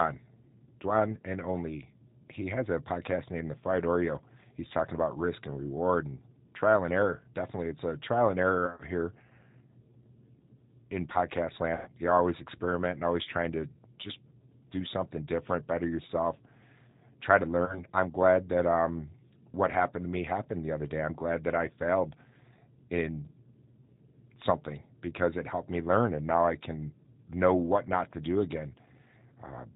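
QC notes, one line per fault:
Throughout, G.729 codec: the speech has a thin, slightly rough, synthetic edge, and nothing above 4 kHz comes through, so sibilants sound dull. That sound fits an 8 kbit/s G.729A stream. The codec doesn't send the waveform. It rebuilds each 10 ms frame from a vocal-tract filter, a pitch predictor and a handful of pulses, so some buzz and graininess is built in. The damage is plainly audible.
8.67–8.83 s, 11.75–11.90 s, 17.66–17.82 s, VoIP packet loss concealed by the speech codec: the decoder lost packets and filled the gaps by stretching its last pitch and filter settings while fading the level, so each spot turns into a brief stretched, smeared fade. The first comes after "it's a trial and", with about 80 ms missing in short bits over 120 ms. The second, after "in podcast", is about 110 ms. The third, between "try to" and "I'm glad that um", is about 30 ms.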